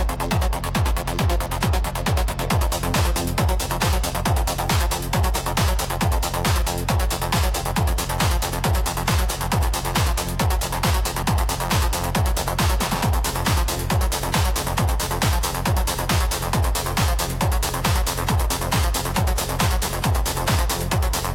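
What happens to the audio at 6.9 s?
Nothing goes wrong at 6.9 s; the audio plays through that moment without any dropout, click, glitch or other audible fault.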